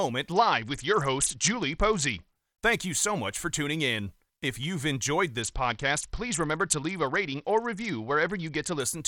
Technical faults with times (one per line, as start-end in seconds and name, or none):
0.32-2.35 Bluetooth SBC bit pool drop
5.42-8.80 Bluetooth SBC bit pool drop